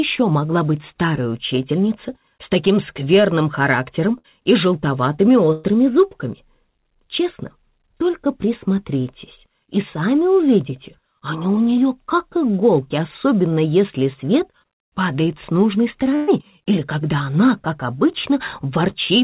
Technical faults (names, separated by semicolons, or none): burst of packet loss